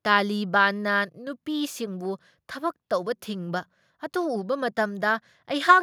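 Nothing in this bit of speech stands out as a technical fault; it just runs along without anything going wrong.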